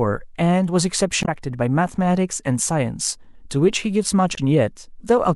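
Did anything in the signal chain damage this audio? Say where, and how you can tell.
Yes, at the codec stage: damaged data in a compressed stream causes brief glitches at 1.22–1.29 s and 4.33–4.39 s. The decoder misreads corrupt frames and loses sync, leaving short disruptions on the spectrogram.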